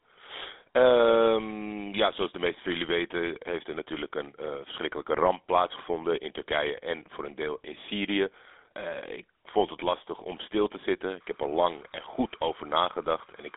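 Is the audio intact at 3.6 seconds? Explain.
No. At 3.6 s the speech has a buzzy, gravelly roughness and a narrow, telephone-like tone, and this runs through the whole clip rather than just that moment. It is plainly audible GSM full-rate codec damage. The codec models the vocal tract and drives it with a sparse, regularly spaced pulse excitation, which produces the buzz. The line keeps only about 300 Hz to 3.5 kHz, and the sound fits the 13 kbps full-rate GSM codec.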